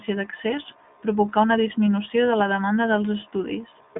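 Throughout, the speech sounds thin and boxed-in, confined to roughly 150 Hz to 3.6 kHz with nothing above 3.8 kHz, and carries a plainly audible rough, slightly synthetic grain. That is the iLBC codec at work: a narrowband VoIP coder that rebuilds each short frame's excitation independently, here in 20 ms frames, which fits the 15.2 kbps mode. The missing upper band and the coarse excitation modelling give the dull, buzzy character.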